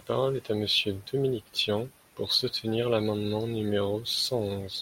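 No technical faults are audible.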